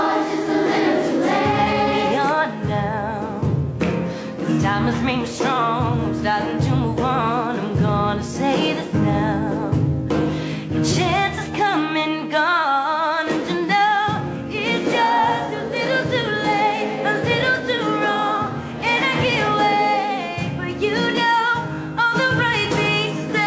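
No technical faults here; the audio shows the expected band limit of a wideband call path, with nothing above 8 kHz, which fits G.722 at 64 kbps.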